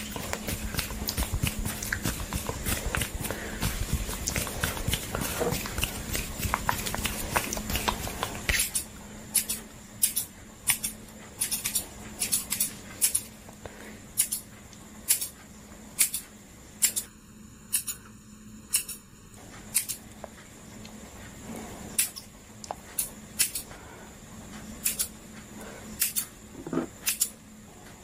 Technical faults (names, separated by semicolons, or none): channel delay (comb filtering)